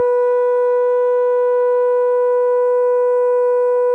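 The music runs without any audible technical faults.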